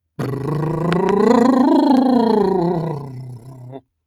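From the first moment to the end, a noise suppressor designed for speech is processing this music. It misreads sustained tones and the ambient tail as background noise and pulls them down, while transients pass largely intact. The gain therefore rides up and down by roughly 10 dB, so held notes sag after each attack and the sound pumps and thins, losing the body that should sit between hits.

Between 0.93 and 1.11 s, two loud pops sit on top of the music, the stronger peaking around 15 dB above the program level. Each is a sharp, brief transient with the music continuing underneath. The paired shape points to a voltage step, likely from a connector or switch being disturbed, so that one impulse arrives on make and another on break or bounce before the downstream circuitry settles.

A second, smaller loud pop occurs from 1.97 to 1.99 s, a single click roughly 5 dB above the signal. It is the kind of impulse that likely comes from a static discharge or a brief driver glitch injecting a spike into the path. 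The music underneath is not interrupted. The click simply lands on top as an isolated tick.

From 2.99 to 3.85 s the same suppressor clamps down harder, and this stretch is sound cut by the noise suppressor. Here it treats the sustained and decaying material as noise and attenuates it by as much as about 18 dB, for roughly a second in total. Tails are truncated and the held content drops away noticeably, while any sharper onsets in the passage still poke through, leaving a hollow, gated quality.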